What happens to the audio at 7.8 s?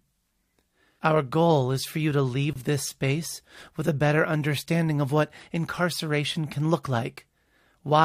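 At 7.8 s the audio plays through cleanly, with no dropout, click, distortion or other fault.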